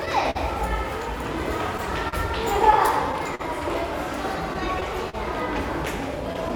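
A recording of everyday sounds, carrying clock drift between sender and receiver for its whole length. The sending clock runs slow by roughly four percent, so the receiver's jitter buffer keeps draining. Short pieces get repeated, leaving small timing hiccups at uneven intervals throughout. From 0.05 to 3.41 s there are scattered short gaps, around seven of them, the longest near 50 ms. Each lost or late packet was patched by extending the preceding sound, about 150 ms of fill in all. Nothing is dropped, but brief ticks and smears show through. Between 4.53 and 5.15 s come repeated stalls (stutter): three gaps totalling 60 ms, the longest 38 ms, concealing about 10% of that span. Packets arrived more slowly than playback, so the buffer emptied each time and the last sound was held until delivery resumed, making the audio drag and stutter.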